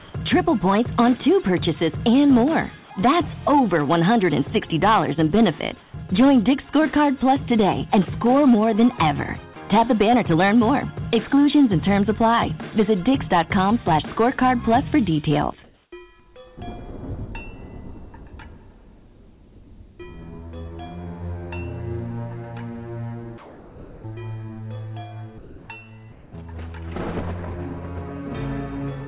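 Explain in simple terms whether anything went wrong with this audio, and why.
Two things went wrong. The first is hard clipping. Somewhere along the way the sound arrived louder than one stage could handle, so the tops of its loudest moments were sliced off flat. That slicing adds a harsh, crackly fuzz on top of the loud parts. It runs through five long stretches: 0.34 to 2.60 s, 3.48 to 5.67 s, 6.18 to 9.10 s, 9.73 to 12.43 s and 12.79 to 15.48 s. The overload is moderate, but it is steady.

The second is comfort noise in place of the background. During pauses the sending side likely stopped transmitting real sound, and the receiving side filled the gap with a smooth, made-up hiss. You hear the natural background vanish, replaced by a plain, featureless noise, at 0.0 to 0.14 s, 5.80 to 5.94 s, 15.64 to 15.92 s, 23.38 to 24.04 s, 25.38 to 25.68 s and 26.12 to 26.34 s. Most of these patches are a little quieter than the real background. 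The first is slightly louder, and the one at 15.64 s is clearly louder.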